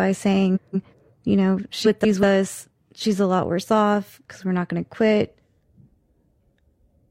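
From 0.55 to 0.94 s, just before "you know", and again from 1.84 to 2.23 s, right after "you know", frames arrive out of order: two adjacent blocks of about 186 ms each swap places, consistent with runs of four frames. The speech flutters, and unlike a dropout, nothing goes missing.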